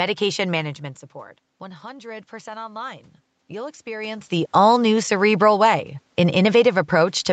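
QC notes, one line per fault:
1.60–4.59 s, automatic gain rising: after "management support" the input falls about 16 dB. The gain control slowly lifts voice and room noise together, about 6 dB.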